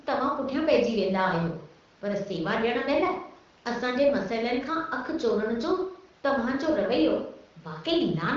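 Nothing goes wrong anywhere in this speech, which comes through the AMR wideband (HD Voice) codec at 15.85 kbit/s with its usual top end stopping around 7.4 kHz and only light coding texture to show for it.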